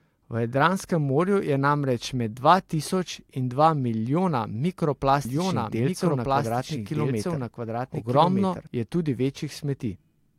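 From 5.25 s to 8.67 s the speech is joined by a doubled audio track: a second, somewhat quieter full-band copy trailing about a second and a half behind, with no decay, starting and stopping abruptly. Likely a slower capture path recording the same signal again.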